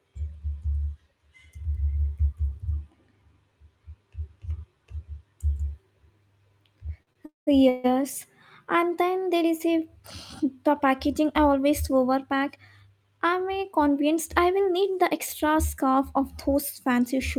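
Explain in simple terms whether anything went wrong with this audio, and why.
Several things went wrong around the middle and later in this speech clip.

At 7.03 to 7.09 s and 7.13 to 7.17 s, late packets left the receiver briefly empty. In each of these short stalls from a late packet, the last sound is held a little too long.

At 7.25 to 7.49 s and 7.69 to 7.86 s, packets were likely held up in transit, causing call audio freezes. The sound stops, with the first gap fading to near silence, then carries on where it left off.

From 12.23 to 13.48 s, between "the packaging I always" and "uh convinced I will", a jitter buffer speed-up catches up by trimming tiny slices. The sound runs about 10% faster at the same pitch and feels hurried.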